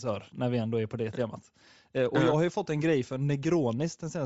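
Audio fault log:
Throughout: Bluetooth LC3 compression. The speech has a plainly audible breathy, grainy edge. The upper range sounds hollow and hissy rather than clear. The likely cause is the LC3 codec of Bluetooth LE Audio. At a low bitrate it discards much of the high spectrum and fills the gaps with noise. The damage fits roughly 32 kbps with 7.5 ms frames.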